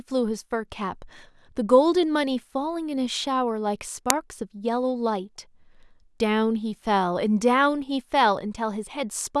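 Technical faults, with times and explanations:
4.10 s, uninitialised buffer: a sharp, loud click of digital noise lasting about 1.33 ms, which fits a 32-sample block. That block got played before any audio was written into it, so whatever junk sat in memory came out as samples.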